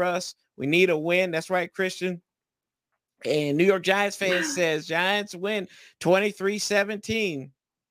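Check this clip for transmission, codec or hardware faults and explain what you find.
One hardware fault runs through the whole speech clip: sample clock jitter. The converter's clock wanders by a few microseconds, so samples land early or late. Steep waveform slopes turn this into error about 30 dB down. It sounds like hiss riding on loud, bright passages, gone in pauses.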